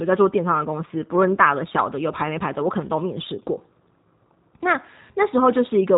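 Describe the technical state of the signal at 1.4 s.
At 1.4 s the speech carries G.729 codec coding, as it does for the whole clip. Each 10 ms frame is rebuilt from a vocal tract filter, pitch prediction and sparse pulses, which fits an 8 kbit/s codec. Nothing above 3.8 kHz survives, leaving plainly audible roughness and a synthetic edge.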